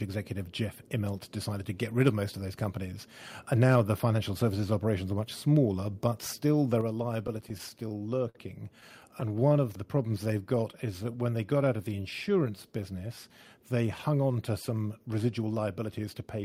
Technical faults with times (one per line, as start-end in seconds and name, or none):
6.81 microphone volume stepped down
7.27-8.37 repeated stalls (stutter)
8.81-9.52 repeated stalls (stutter)
9.53-12.81 jitter buffer slow-down
14.70-16.43 jitter buffer speed-up